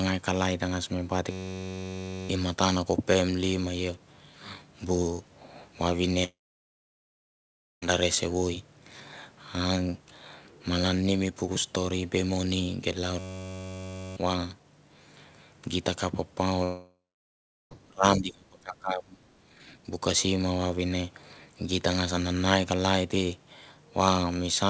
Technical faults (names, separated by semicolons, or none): system hang loop; long network dropout; speech suppressed in double talk; background gated by the echo canceller